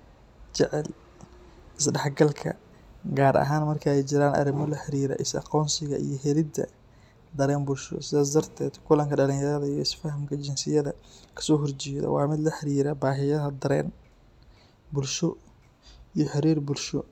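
No technical faults can be heard anywhere in this speech recording.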